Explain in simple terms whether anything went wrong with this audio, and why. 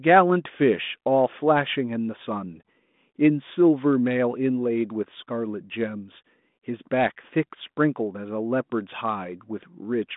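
Nothing went wrong: the speech comes through the G.726 ADPCM telephone path as intended, with the narrow, phone-like sound that path normally gives.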